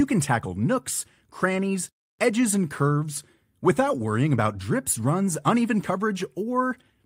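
Nothing in this speech clip points to a technical fault at any moment, so there's nothing here to flag.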